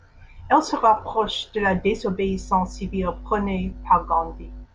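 From 2.23 s to 4.67 s, mains hum sits under the speech: a steady low tone at 50 Hz with a few low harmonics, fairly strong at roughly 15 dB below the voice. Power-line current has leaked into the signal path, likely through a ground loop or a nearby transformer. The pitch is fixed and unwavering, which separates it from handling noise or wind rumble. Those are broadband and shifting, with no single steady tone.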